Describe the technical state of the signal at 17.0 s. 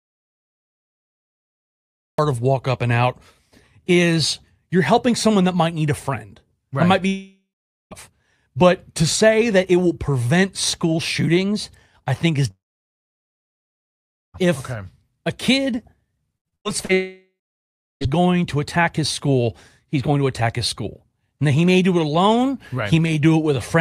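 At 17.0 s the sound is a fading buzz or hiss that drops into near silence for about 0.7 s, part of a long network dropout from 16.93 to 18.04 s. The likely cause is about 1.08 s of audio never arriving, with the receiver extending the last sound before giving up.

Just before that, right after "if okay a kid", the sound turns choppy from 16.38 to 16.92 s. This is repeated packet loss: five gaps, the longest 90 ms, each patched by continuing the previous sound, covering about 43% of that stretch.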